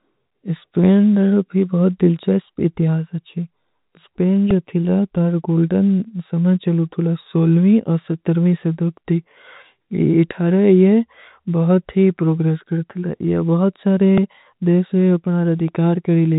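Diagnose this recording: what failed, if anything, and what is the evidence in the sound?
A repeated buffer at the driver or buffer stage produces brief clicks at 4.51 s, just before "ଜୋ ଥିଲା", and at 14.18 s. A piece about 1.45 ms long, fitting a 64-sample buffer, replays three and then two extra times with hard joins. Unlike a dropout, no audio goes missing.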